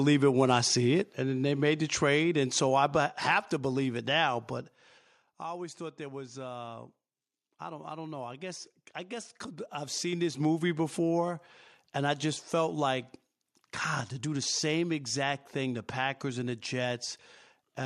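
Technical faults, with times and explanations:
0.53–0.58 s: microphone overload. A brief harsh, crackling edge lands on the loudest peak, which drives about 2 dB past the converter's limit and flattens a small fraction of the samples. The likely cause is an input volume set high enough that the converter cut off the waveform tops.
1.02 s and 3.06 s: microphone volume stepped down. The voice and background drop together, suddenly, by about 3 dB each time, the first soon after the distorted peak. This is likely call software hearing the overload and cutting the device's input gain in one jump.
9.44–10.47 s: zipper noise. A ticking rides on the sound while the level changes by roughly 10 dB in 3 dB steps, about four per second. Each step changes the gain instantly with no smoothing, so it puts a small click into the waveform.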